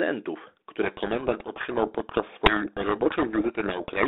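A codec payload misread sets in at 0.83 s and runs to the end of the speech: the receiver unpacks each G.726 code word with its bits in the wrong order, so the sample differences fed to the adaptive predictor come out wrong. The speech is buried under harsh, grinding distortion. Before that point the sound is narrow telephone band, roughly 250 Hz to 3.6 kHz, with the light coding grain that fits 32 kbit/s G.726.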